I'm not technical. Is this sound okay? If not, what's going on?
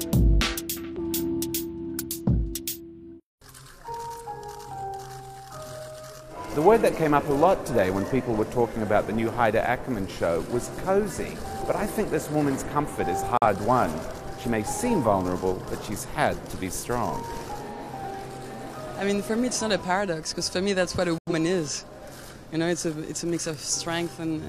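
No. There are two digital broadcast dropouts. The sound cuts out briefly at 13.37 to 13.46 s, then again at 21.18 to 21.32 s. The receiver lost the signal and muted until it recovered. The second gap is longer and fits about two lost frames.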